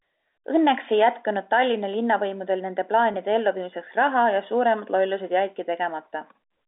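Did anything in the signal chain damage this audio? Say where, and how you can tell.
Yes, at the network stage: packet loss with pitch repetition at 3.12 to 3.14 s. The last pitch period is repeated, giving a briefly held, buzzy tone instead of the silent gap or click of a plain dropout, which fits a single lost 20 ms packet concealed over the G.711 line.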